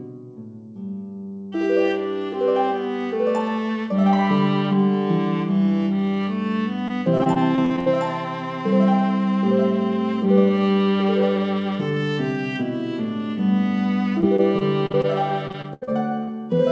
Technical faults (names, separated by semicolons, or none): repeated packet loss (robotic sound)